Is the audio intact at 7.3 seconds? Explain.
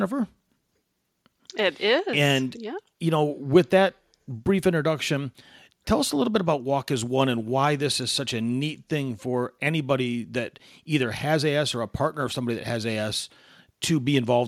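Yes, the speech at 7.3 seconds plays through cleanly, with no dropout, click, distortion or other fault at that moment.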